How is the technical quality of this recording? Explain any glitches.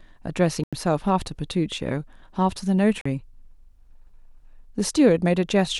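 The speech is interrupted twice by brief dropouts that look like a Bluetooth stall: the sound stops dead at 0.64 s for about 90 ms and again at 3.01 s for about 41 ms. The likely cause is radio interference delaying packets, so the headphone buffer emptied and playback halted until retransmissions arrived. Each gap is a clean cut to silence, after which the speech resumes abruptly rather than fading back in.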